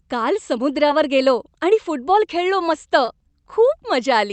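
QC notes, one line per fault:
0.87–0.91 s and 3.05–3.09 s, short concealed packet loss: about 20 ms of speech never arrived, first just before "गेलो आणि फुटबॉल खेळलो", then just after "आणि फुटबॉल खेळलो मस्त". The receiver extended the preceding sound and blended back, so each is a brief smear rather than the silent hole of a plain dropout.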